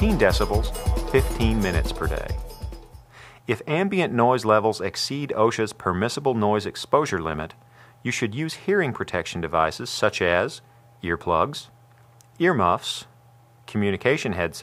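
No dropouts, clicks, distortion or level jumps turn up anywhere in this audio, so there is nothing to flag.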